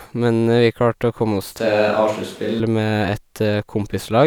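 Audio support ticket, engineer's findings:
Speech turns roomy and hollow abruptly at 1.59 s, snapping back at 2.60 s. Likely a switch to a distant microphone, with the close mic's signal dropped. No clear level drop. Thinner low end and a room-noise floor around 25 dB below speech. Spectrogram: sudden loss of low-frequency energy, smeared reverberant tails, raised noise between syllables. Waveform: sharp boundaries, similar peaks, filled-in gaps.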